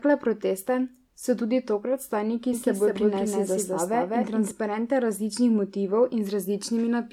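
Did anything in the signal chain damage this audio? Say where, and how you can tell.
Yes. From 2.53 to 4.51 s a doubled audio track appears, likely from a second, slower capture or editing path mixing in another copy. A full-band duplicate trails by around 200 ms at roughly equal level, with no decay or room colour, and it starts and stops abruptly.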